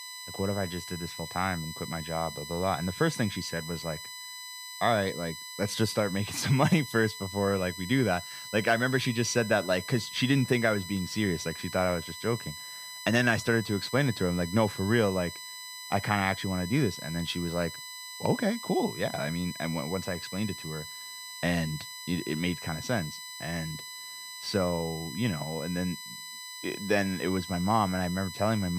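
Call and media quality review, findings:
USB whine, throughout. Fixed-pitch tone on 1 kHz harmonics, strongest at 4 kHz, roughly 15 dB below the speech. Probable component: USB audio interface power/ground. Current drawn in 1 ms bus frames leaks into the analogue path, modulating it at the frame rate.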